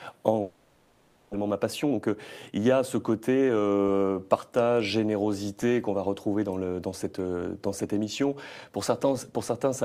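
At 0.41 s the sound stops arriving and the gap is filled with a continuation of the last sound. That fill fades but never reaches silence, and it runs for about 0.92 s, to 1.35 s. When the audio returns, about 0.6 s of it is simply gone. This is likely a long network dropout. Packets stopped coming, and the receiver extended what it last had until fresh audio arrived.

Two jitter buffer speed-ups follow. The first runs from 1.43 to 2.11 s at 117% speed. The second runs from 2.51 to 3.99 s at 111%. Pitch stays put, but the sound is audibly hurried, more so in the first stretch. The buffer had built up extra delay, around 300 ms, after the dropout. To cut it, the receiver kept slicing out tiny pitch-period chunks. Roughly 100 ms went in the first stretch and roughly 200 ms in the second.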